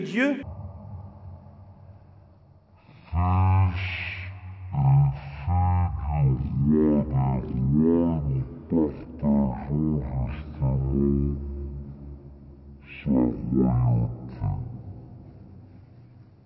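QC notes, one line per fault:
0.43–16.45 s, wrong sample rate: the audio plays at about 0.36 times its proper speed and drops roughly 17.6 semitones, everything slowed and deepened together. It sounds like material captured at 44.1 kHz being clocked out at 16 kHz with no rate conversion in between.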